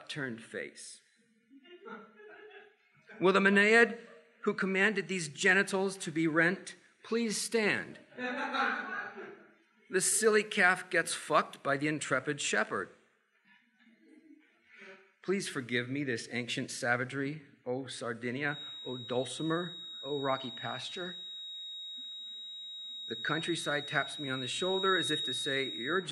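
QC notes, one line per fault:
18.43–26.12 s, feedback whistle: a thin, steady tone near 3.8 kHz sits roughly 10 dB under the sound and swells and fades slowly in level until the end. This is likely a loudspeaker-to-microphone loop held at the edge of feedback, sustaining one frequency without running away.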